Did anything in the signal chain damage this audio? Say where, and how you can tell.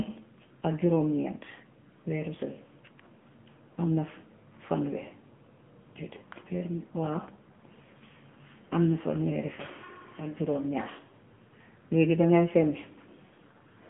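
Yes, at the codec stage: AMR narrowband mobile codec damage throughout. Nothing passes above 3.6 kHz. The buzzy, synthetic speech suggests a low bitrate near 8 kbps.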